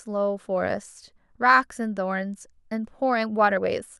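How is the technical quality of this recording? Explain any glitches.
No technical faults are audible in this speech recording.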